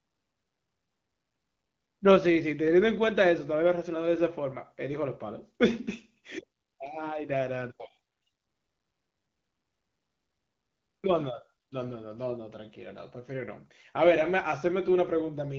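Nothing technically wrong turns up in this speech clip: it's carried over an AMR wideband (HD Voice) link at 12.65 kbit/s, and that path is simply doing its usual job here.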